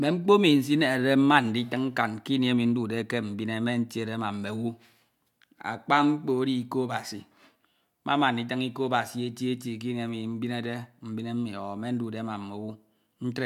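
Nothing in the speech recording points to a technical fault: the signal holds steady throughout, with no breaks, jumps or disturbances anywhere along its course.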